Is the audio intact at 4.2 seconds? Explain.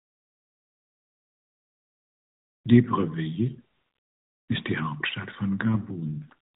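Yes, the speech at 4.2 seconds is intact, with no fault at that moment, only the light, band-limited character of the AMR narrowband mobile codec working normally.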